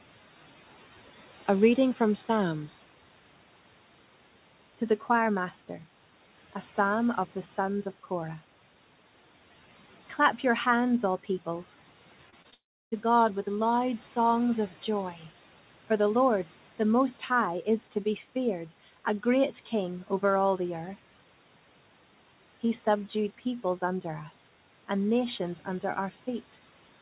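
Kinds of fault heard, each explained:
Short concealed packet loss at 12.30, 12.42 and 12.50 s: right after "your hands all peoples", three bits of audio about 20 ms long each never reached the decoder in time. Each time, the receiver papered over the hole by extending the preceding sound, following its pitch if voiced or as shaped noise if not, and then crossfading back. Each repair sounds like a quick smear or wobble.
Long network dropout from 12.54 to 12.94 s: immediately after the third small gap, the audio stops for about 0.4 s, which points to a stretch of packets that most likely never arrived. The receiver carries the last sound on briefly as a fading buzz or hiss, then most of the gap, about a third of a second, is plain silence. The audio returns at 12.94 s with that portion simply missing rather than delayed.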